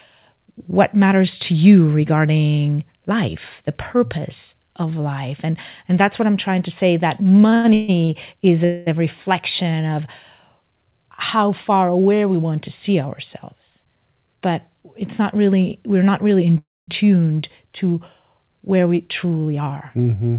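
From 7.5 to 8.11 s, between "trying to say that" and "is a", the audio shows repeated stalls (stutter). Four times in about 0.6 s the playback halts and the last sound is held and repeated, the longest hold about 0.14 s. Altogether about 0.3 s, half that stretch, is filled-in sound rather than new audio, so the speech drags and catches. On a spectrogram this appears as short smeared bands where the harmonics freeze in place, breaking the normal flow of syllables.

At 8.65 to 8.88 s a call audio freeze continues one sound for about 0.22 s as a fading buzz or hiss, with nothing lost once it resumes. The likely cause is packets held up on the way that left the jitter buffer empty. The waveform shows a short repetitive block, and the spectrogram shows static horizontal lines that break the speech's changing pattern.

From 13.56 to 14.89 s, after "we want to see" and before "it's not really we're", there is a jitter buffer speed-up. 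Playback runs at about 112% as the receiver trims whole pitch cycles, roughly 150 ms in total, to cut built-up delay. The pitch stays the same, but the delivery sounds hurried. The spectrogram looks slightly compressed in time, with syllables crowded closer together.

A second call audio freeze runs from 16.58 to 16.89 s, between "we're not really in" and "tuned to". About 0.3 s is filled in. The held sound fades out and then stays silent for about 0.22 s before the speech resumes. This likely comes from the same kind of late packets draining the buffer. The waveform shows a decaying tail followed by a flat line, and the spectrogram shows a blank gap.

From 18.79 to 20.06 s another jitter buffer speed-up plays the audio at about 110%, again trimming roughly 150 ms. The same pitch is kept over a quicker pace, and the spectrogram shows the same tight, time-squeezed spacing. Throughout the clip, the call codec path leaves nothing above 4 kHz, which fits 64 kbps G.711 A-law, and the spectrogram shows a hard ceiling at that frequency.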